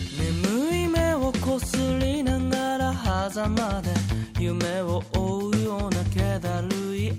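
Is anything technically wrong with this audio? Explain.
No, no technical faults detected.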